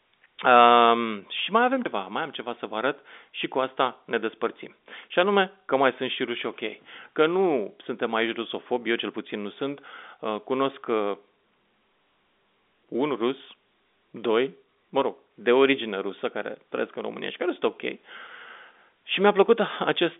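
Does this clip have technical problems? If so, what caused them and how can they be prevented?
No, the speech carries no technical faults; it has the narrow band of a telephone line, roughly 250 Hz to 3.6 kHz with nothing above about 3.7 kHz, which fits ordinary 64 kbps G.711 A-law coding working as intended.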